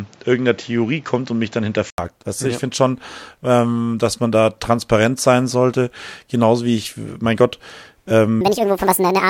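From 0 to 1.98 s the speech is dull and band-limited, with a new noise floor around 30 dB down. An 80 ms gap follows, visible as a flat waveform. This likely means the input switched to a poorer device.

From 8.41 s to the end, the speech runs 1.69 times too fast and rises nearly ten semitones. A spectrogram shows harmonics shifted upward, which likely means the section was played at the wrong speed.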